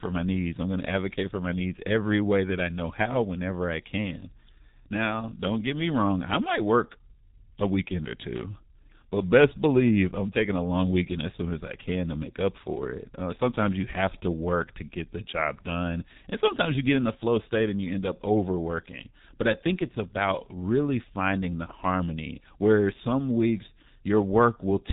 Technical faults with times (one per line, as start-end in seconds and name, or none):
0.00-24.92 G.723.1 codec